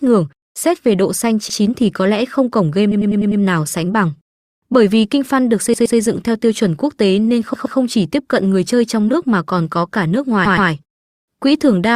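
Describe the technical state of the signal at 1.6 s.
At 1.6 s the speech sits just after a repeated frames fault spanning 1.49 to 1.59 s. A 100 ms block of compressed frames reaches the decoder twice, so that fraction of a second plays again as an audible stutter, lengthening the audio by 100 ms.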